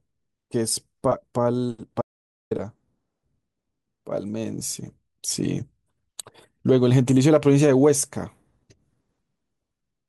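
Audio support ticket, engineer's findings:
Audio dropout to silence, 2.01–2.51 s: speech cuts out mid-flow for about 0.5 s, gap is silent with no room tone. Likely input loss upstream (device disconnect, link failure or mute) while the recorder kept writing silence. Content in gap unrecoverable.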